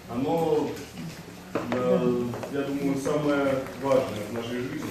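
No technical faults can be heard anywhere in the audio.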